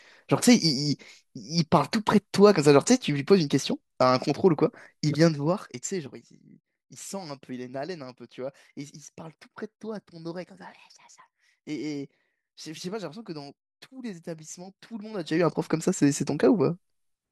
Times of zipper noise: 15.14-15.49

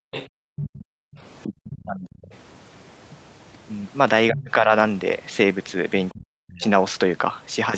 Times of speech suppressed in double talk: 0.29-2.31, 4.30-4.71, 6.12-6.62

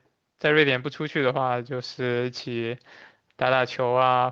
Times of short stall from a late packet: 1.43-1.47

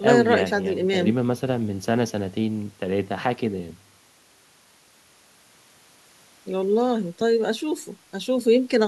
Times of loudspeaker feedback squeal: none

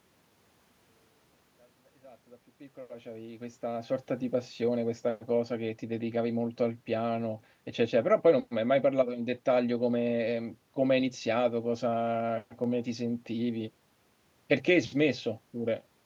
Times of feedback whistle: none

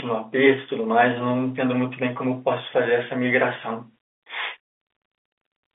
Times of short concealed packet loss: none

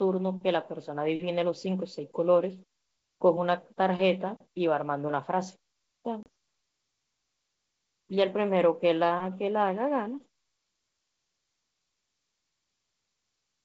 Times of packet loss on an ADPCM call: 6.23-6.27

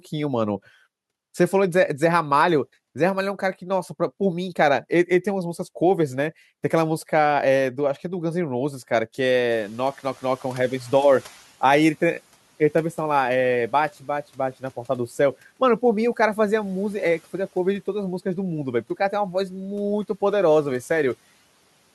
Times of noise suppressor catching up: 9.51-11.48

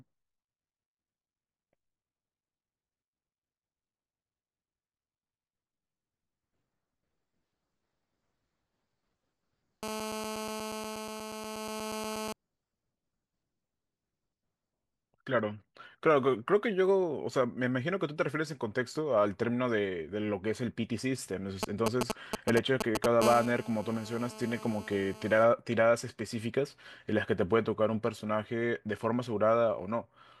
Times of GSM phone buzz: 9.83-12.33, 23.22-25.44

